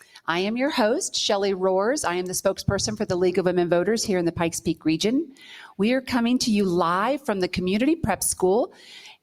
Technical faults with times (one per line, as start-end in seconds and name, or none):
0.00-9.22 noise suppressor applied to music or sounds
0.01-0.21 sound cut by the noise suppressor
8.68-8.85 sound cut by the noise suppressor